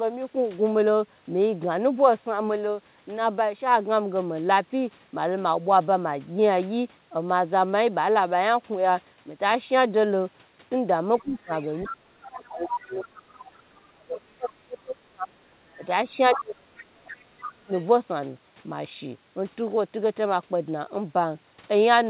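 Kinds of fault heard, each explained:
Other side's voice leaking through: at 11.17–13.54, 15.69–15.86, 16.33–16.44, 16.78–16.98 and 17.4–17.85 s, a second voice sits under the speech, ranging from faint to nearly as loud. This is likely far-end loudspeaker sound reaching the microphone that the echo canceller failed to remove.
Speech suppressed in double talk: at 11.22–11.51, 11.85–15.81 and 16.3–17.7 s, the speech dips sharply and in pieces, by roughly 20 to 35 dB, overlapping that second voice. The echo canceller likely could not separate talker from echo and turned both down.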